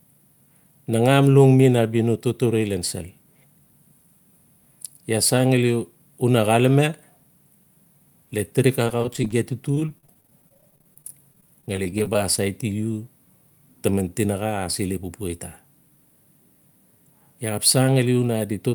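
Right after "le tirik", from 8.87 to 9.33 s, there's repeated packet loss (robotic sound): a string of tiny holes, none over 12 ms, each patched by stretching the last bit of sound. It returns from 9.75 to 12.39 s, with gaps up to 21 ms, choppy throughout.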